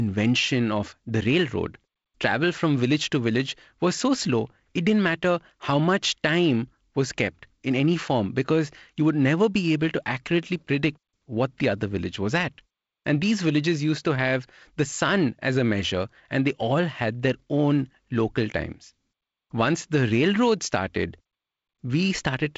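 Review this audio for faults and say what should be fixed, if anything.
No faults; nothing needs fixing.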